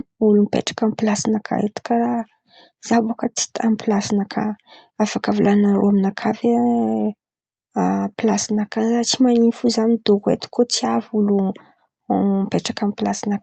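Right from the start there's clock drift between sender and receiver: the sending side's clock runs fast, by roughly 4 percent, so audio arrives quicker than the receiver plays it out. The jitter buffer keeps overfilling, and the timing never quite settles across the speech.

That shows up as repeated timing corrections from about 0.36 s through 13.29 s. To keep up, the receiver keeps trimming short slices, so the speech plays at about 104 percent speed. The cuts all go one way but land unevenly, giving small hiccups and a slightly rushed, uneven pace, heard through a call codec path that tops out around 8 kHz.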